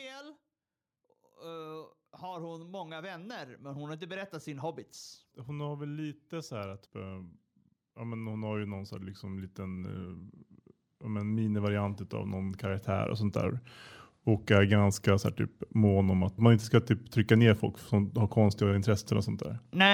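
Automatic gain rising occurs three times: the automatic gain control judged the input too quiet and pushed its gain up gradually. From 1.37 to 7.3 s the level climbs by about 12 dB, then from 7.94 to 10.29 s and 11.0 to 13.61 s by about 6 dB each. Speech and background noise swell together over these stretches, so the background grows along with the talker rather than the voice alone getting louder.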